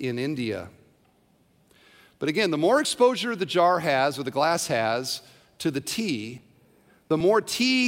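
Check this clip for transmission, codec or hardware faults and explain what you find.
One fault is present. From 6.38 to 7.21 s the speech carries processor overload crackle. The system keeps missing its deadline for short buffers, around 10 ms each, and about fifteen are skipped. Each skip leaves a hard-edged gap, so the effect is a gritty tearing. A single dropout would be one clean hole, but this is a dense cluster that stops once the load passes.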